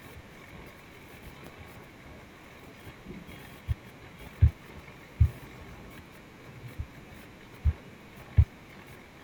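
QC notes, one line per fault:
1.47–1.49 s, loud pop: a single sharp pop, peaking a few decibels above the speech and lasting about 20 ms, while the speech carries on underneath. A sudden voltage step or pulse, likely from a plug, switch, static discharge or driver glitch, was added to the signal. The circuitry after it shaped that pulse into a brief, hard transient, which the ear hears as a pop on top of the speech rather than a break in it.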